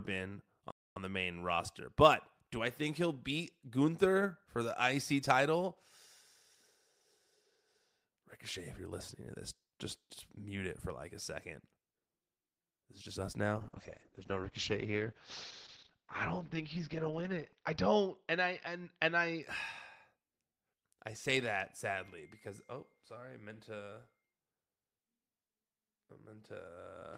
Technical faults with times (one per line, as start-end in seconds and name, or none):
0.71-0.96 playback stall
13.58-19.49 call bitrate drop